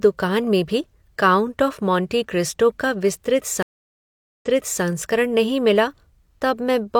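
A speech recording with a stream reconnect between 3.63 and 4.83 s. The audio cuts to about 0.78 s of silence, then resumes roughly 0.42 s earlier than where it broke off, so a short stretch of speech is heard twice, with the first moments faded in as a fresh decoder starts mid-stream. That backward jump and repeat separate it from an ordinary dropout or packet loss, where the audio simply goes missing and picks up where it should.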